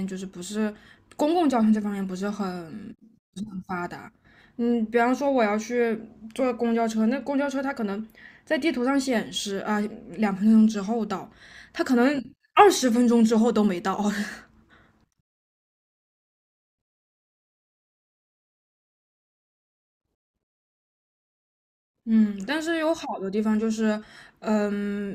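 Nothing goes wrong anywhere in this stretch of speech, so there's no fault here to point to.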